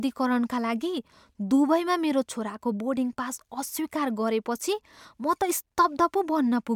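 Nothing in the speech here points to a technical fault, so there's nothing to flag at any point in the recording.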